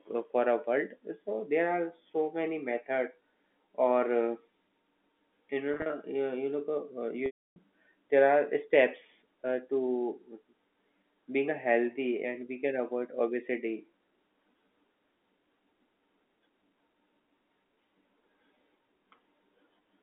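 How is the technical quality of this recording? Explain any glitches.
Two dropouts from packet loss with pitch repetition mar this telephone-band recording, which sits within about 250 Hz to 3.4 kHz as G.711 A-law coding passes it.

At 5.74 to 5.90 s, about 100 ms is lost in short runs of at most 40 ms. The receiver loops the last pitch period, giving a brief buzzy hold. A spectrogram shows flat, frozen harmonic stripes, and the waveform shows identical repeating cycles. At 7.26 to 7.56 s, a 300 ms loss outlasts the repetition, so the held buzz fades to silence before the speech cross-fades back. On a spectrogram this appears as frozen stripes dissolving into a blank gap.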